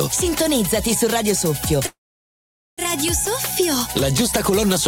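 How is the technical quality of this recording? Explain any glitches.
One glitch stands out. A call audio freeze runs from 1.87 to 2.81 s. Packets were likely held up in transit and the jitter buffer ran dry, so the last sound stretches into a short fading buzz, then about 0.82 s of silence. The audio resumes where it stopped with nothing lost, but everything afterwards plays about 0.9 s late.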